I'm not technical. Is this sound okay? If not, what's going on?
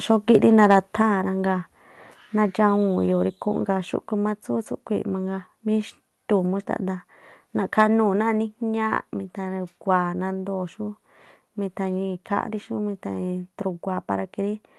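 No. Around 0.71 to 0.75 seconds, and again at 7.79 to 7.82 seconds, the loudest moments get a brief harsh, crackly edge. That is microphone overload: the microphone was likely set too sensitive, so the tops of those peaks got chopped off.

Just after the first crackle, at about 1.02 seconds, the voice and the background both suddenly get a bit quieter and stay that way. This is the microphone volume stepped down, likely by the call software turning the input down once it noticed that distortion.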